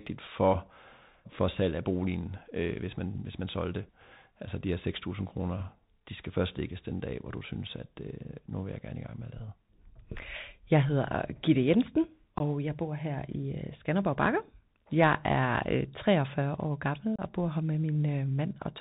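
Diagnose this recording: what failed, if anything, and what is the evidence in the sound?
The speech passed through a Bluetooth CVSD headset codec at the codec stage, a one-bit delta modulator with an adaptive step, running as a 64 kbps link. Nothing above about 4 kHz survives, sibilants turn scratchy, and a granular hiss sits under the speech throughout.

Unconcealed Bluetooth headset packet loss occurred on the radio link. A handful of voice packets were dropped and replaced with silence or an idle pattern rather than concealed, leaving abrupt holes of about 19 ms at 12.38–12.42 s, just before "jeg bor her", and about 30 ms at 17.16–17.20 s, just before "og bor her med".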